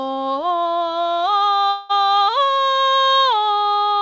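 This music clip, carried over a call path whose band stops at 8 kHz in the way a G.722 codec at 64 kbps would leave it, has a call audio freeze from 1.70 to 1.91 s. Packets were likely held up in transit until the jitter buffer emptied, so the receiver stretched the last sound into a fading buzz or hiss for about 195 ms. When the audio resumes it carries on where it stopped, with nothing lost but everything afterwards arriving about 195 ms later.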